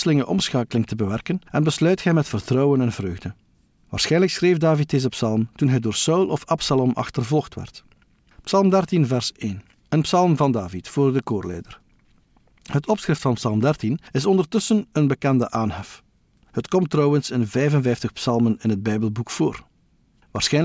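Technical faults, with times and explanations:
No technical faults turn up anywhere in this speech recording.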